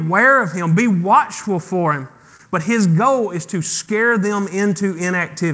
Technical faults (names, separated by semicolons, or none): clock drift between sender and receiver; repeated timing corrections; short stall from a late packet